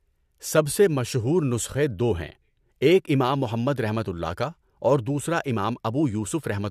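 No technical faults can be heard anywhere here.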